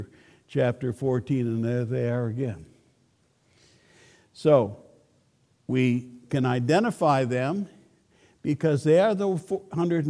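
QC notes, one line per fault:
No faults were found on a full listen of this audio.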